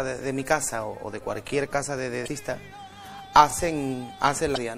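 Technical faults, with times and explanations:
Throughout: MP3 compression. The high detail sounds watery and swirly, with a metallic chirping on bright, hissy sounds and softened attacks. That is the sound of an encoder short of bits, and the amount of damage fits a low rate around 64 kbps. The encoder zeroes weak frequency lines, which then flicker in and out from frame to frame. This is likely the cause of the swirling texture.
2.24–2.28 s and 4.53–4.58 s: damaged data in a compressed stream. Each event is a short squawk or blip lasting about 44 ms. Here part of the compressed data is corrupted, so the decoder misreads or discards the affected frames and loses its place. It then searches for the next valid frame header, and the gap and garbled output in between form the blip.
3.51–3.53 s: overlapping chunks. A click or stutter is heard where a 25 ms slice of sound plays twice. The audio was handled in pieces about 2.0 s long, and the next piece began before the previous one had finished. 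That overlap repeats the tail of one chunk at the join, so the doubled fragment breaks the flow with a short hiccup instead of a clean seam.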